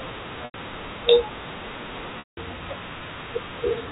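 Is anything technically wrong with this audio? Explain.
Yes, there's packet loss with pitch repetition in two spots: 0.45 to 0.54 s (about 90 ms) and 2.19 to 2.37 s (about 180 ms). The receiver loops the last pitch period to cover each gap, so you hear a brief buzzy hold that fades out. The longer gap drops to silence before the speech cross-fades back in, all within the 4 kHz ceiling of the G.711 phone line.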